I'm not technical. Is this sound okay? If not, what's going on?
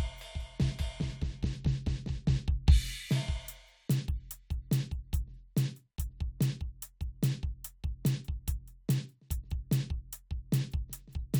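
Yes, this music sounds fine.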